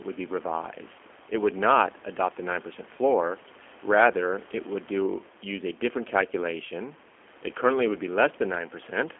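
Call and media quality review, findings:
G.729 codec, whole clip: speech band-limited to roughly 250 Hz to 3.4 kHz, with a rough, slightly synthetic edge that's plainly audible. Sounds like G.729A at 8 kbit/s rebuilding speech from a filter, pitch predictor and sparse pulses. Mic-side processing before the codec just trims the lowest bass.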